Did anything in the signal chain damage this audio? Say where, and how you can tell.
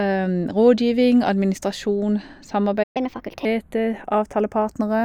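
Yes. At the converter stage, the two channels sit on separate clocks roughly 40 ppm apart, so their offset creeps to a fraction of a millisecond. Summed to mono, this channels drifting apart gives slow flanging.

In the playback buffer, the speech cuts to silence from 2.83 to 2.97 s, about 121 ms. This playback stall is likely an underrun or a blocked audio thread.

Also at playback, from 2.97 to 3.45 s the speech runs 1.25 times fast, pitch raised roughly four semitones. This is catch-up at higher speed, resampling the backlog before returning to normal.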